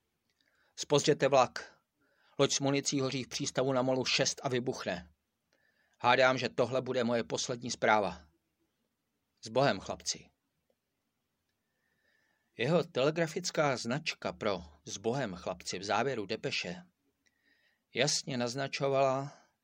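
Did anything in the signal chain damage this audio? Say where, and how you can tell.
No, the signal chain left no audible damage here.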